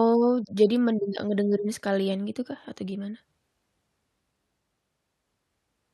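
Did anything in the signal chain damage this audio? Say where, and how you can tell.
Yes. A bit error spike in storage or on a digital link flipped one bit in single samples at 0.76 s and 2.72 s, jumping the value by a power of two before it returned. Each is a sharp broadband tick, about −19 dBFS then about −31 dBFS, unrelated to the speech.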